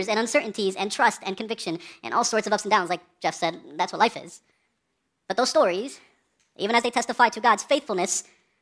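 Wrong sample rate, throughout the clip: the speech runs about 1.38 times too fast and sits roughly 5.5 semitones high, so it sounds hurried and chipmunk-like from start to finish. Speed and pitch move together because the samples are being clocked out faster than they were captured, with no rate conversion in between. The ratio fits audio recorded at 16 kHz being played back at 22 kHz.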